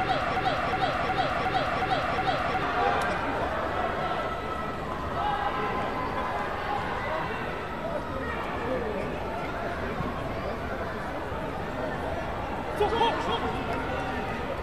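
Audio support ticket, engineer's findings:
Broken-record loop from clip start to 2.63 s: same 0.36 s fragment repeats six times back to back. Likely stalled player or stream re-sending its last buffer; underlying audio lost.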